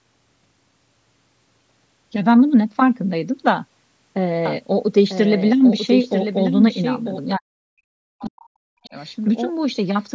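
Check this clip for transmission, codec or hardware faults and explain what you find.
The speech has three faults, clustered from 4.46 s onward.

From 4.46 s to the end, a doubled audio track runs under the speech. A second full-band copy trails roughly one second behind, about 10 dB quieter. It likely comes from a slower second capture path, or from an edit holding two copies out of step. It starts abruptly and has no decay or room colour.

From 7.36 s to 8.95 s, speech is suppressed in double talk. The far side was playing on the loudspeaker while this talker spoke. The echo canceller likely could not tell them apart and turned both down. The voice dips by up to about 40 dB, for roughly 1.5 s in total.

Within that stretch, the other side's voice leaks through twice. The first scrap runs from 8.19 to 8.25 s, about 25 dB below the speech. The second runs from 8.84 to 8.88 s, about 35 dB below. 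The echo canceller likely left part of the loudspeaker sound in the microphone signal.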